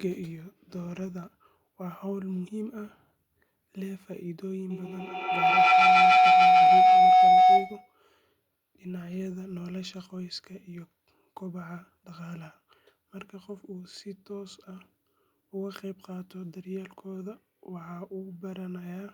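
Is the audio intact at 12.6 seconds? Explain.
Yes, the audio is intact at 12.6 seconds, with no fault to be heard at that moment.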